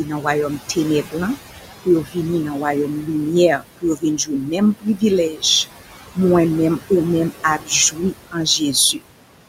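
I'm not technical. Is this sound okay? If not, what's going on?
No. A noise suppressor is filtering out the room's background noise. It is running throughout. The noise drops between words and comes back under them.

There is also speech cut by the noise suppressor. The filter mistakes quiet parts of the talking for noise and turns them down. Soft sounds and word endings come out swallowed or faint. This happens from 0.04 to 1.38 seconds, 1.85 to 2.17, 2.87 to 3.09, 3.58 to 5.43 (the longest stretch) and 7.3 to 8.61.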